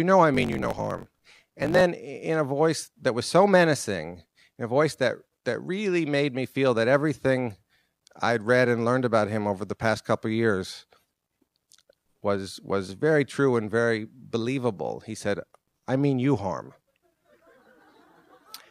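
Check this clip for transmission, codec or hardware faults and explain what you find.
One fault stands out, a block size mismatch (truncated), from 0.33 to 1.82 s. One stage writes longer blocks than the next reads, so each block's tail is discarded, which fits 1024-sample blocks being cut short. The audio runs 1.16 times fast with an unchanged timbre and a 50 Hz buzz. On a waveform, discontinuities recur every 20 ms. On a spectrogram, thin vertical lines repeat at that rate.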